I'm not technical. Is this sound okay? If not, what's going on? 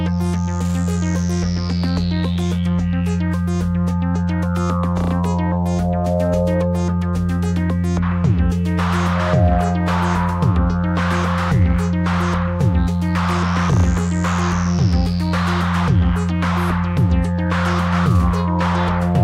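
Yes, this sound is okay. Nothing in it points to a technical problem, so there is nothing you need to worry about.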